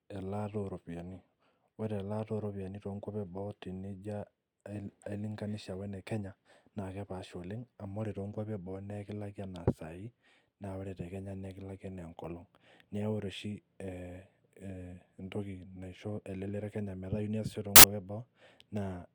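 At 17.76 s, for about 80 ms until 17.84 s, the speech gives way to a burst of loud, harsh broadband noise. These are samples built from the wrong bytes: the reader misassembled each sample, so the rapidly changing low-order bits ended up dominating every value.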